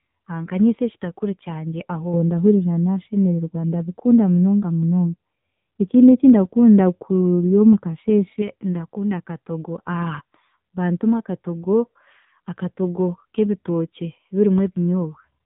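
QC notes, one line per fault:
Throughout: AMR narrowband mobile codec. Nothing gets through above about 3.8 kHz, and the damage is heavy. The speech has a buzzy, synthetic quality because the codec rebuilds each short frame from a vocal-tract model excited by only a few pulses. That level of damage fits a low rate around 6.7 kbps. A plain band-limit would cut the top the same way but leave the voice natural, so the buzz is what marks this as the codec.
2.14–8.42 s: De-emphasis applied wrongly. For these six seconds the speech turns dull and muffled, a step darker than the rest of the clip. A treble cut meant to undo pre-emphasis has landed on audio that never had it, so the response tilts down gradually, by about 11 dB at 10 kHz relative to 1 kHz. Because the slope is smooth, presence fades without a hard edge. That separates it from a low-pass filter, and it comes and goes.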